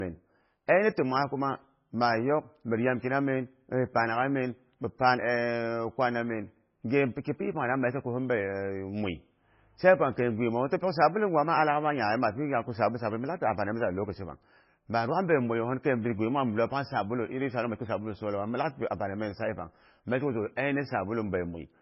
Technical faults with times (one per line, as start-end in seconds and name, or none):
0.00-21.82 low-bitrate audio saved at a high bitrate